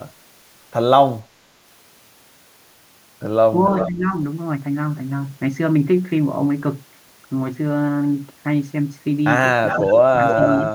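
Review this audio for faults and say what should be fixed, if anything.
Echo leak: the far end's echo canceller likely left part of its loudspeaker pickup in place, so the speech returns about 0.41 s late and roughly 10 dB down. Faint delayed copies are audible at 3.77–3.89 s, 9.67–9.98 s and 10.29–10.59 s.

Speech suppressed in double talk: during overlapping talk the canceller likely mistook the near talker for echo and attenuated both. The speech dips at 3.87–4.09 s and 10.64–10.75 s, by around 10 dB, and more deeply, close to 20 dB, at 10.1–10.48 s.

Retuning the echo canceller's adaptation and double-talk detection, or switching that side to a headset, would stop both.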